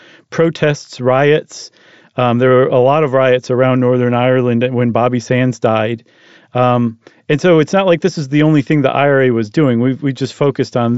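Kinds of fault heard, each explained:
No faults are heard; the speech comes over a Bluetooth mSBC headset codec link, with nothing above 7.7 kHz and light grainy damage from the codec on louder sounds.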